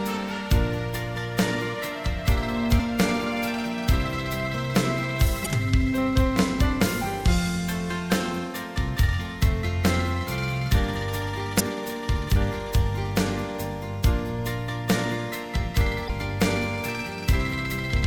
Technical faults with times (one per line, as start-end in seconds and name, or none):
2.76-2.80 damaged data in a compressed stream
5.42-5.47 damaged data in a compressed stream
11.56-11.61 damaged data in a compressed stream
16.05-16.10 damaged data in a compressed stream